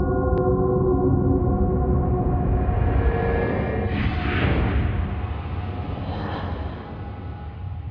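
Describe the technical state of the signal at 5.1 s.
At 5.1 s the signal is intact, with no audible fault at that point.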